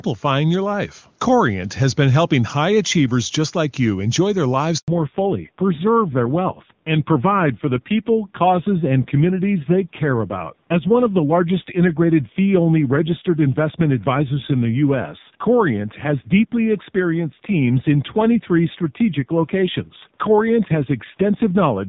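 At 4.78 s the speech cuts out for 100 ms, until 4.88 s. This is a handover gap: the call was passed from one network link to another, and no speech frames arrived while the switch was in progress. The audio fades out over a few tens of milliseconds and stays silent until the new link starts carrying frames, so whatever was said inside that window is lost.

From 4.88 s to the end there is a fallback to narrowband. Before the handover, the audio extends up to about 7 kHz with the clarity of HD Voice wideband coding at a high rate. Afterwards, nothing above 4 kHz remains. The speech becomes dull and muffled, and it has the rough texture of a low-rate narrowband codec, which fits AMR-NB at around 5.9 kbit/s.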